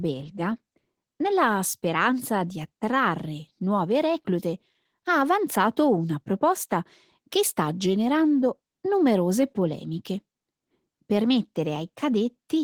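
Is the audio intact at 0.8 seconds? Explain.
No. Opus voice compression runs throughout, consistent with about 16 kbps: coarse linear-prediction coding makes the speech hoarse and slightly robotic. Unlike a plain low-pass filter, some treble remains.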